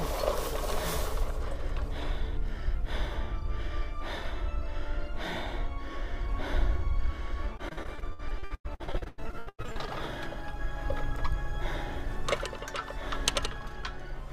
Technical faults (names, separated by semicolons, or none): repeated packet loss (robotic sound)